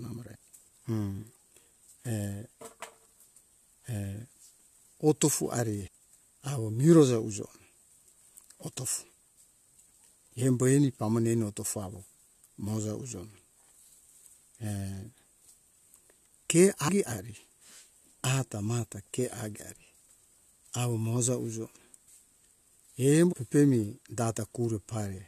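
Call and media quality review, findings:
Damaged data in a compressed stream at 0.34, 5.87, 8.15, 16.87 and 23.32–23.34 s. Short glitch in speech at each, roughly 10–20 ms. Probable component: decoder input, with corrupted or overwritten bytes in the compressed frames. Decoder misreads the bad frames, loses sync and resyncs at the next frame header, giving the brief glitch. Recurrence across the clip points to repeated corruption rather than one bad frame.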